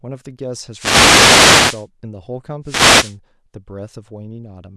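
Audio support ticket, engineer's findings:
Wireless microphone noise hits at 0.70–1.88 s and 2.63–3.16 s: static swish swells over the speech, then clears. Probable component: analogue FM radio link, where reflections cancel the carrier and receiver noise rises. Unlike steady hiss, it comes and goes with the fade.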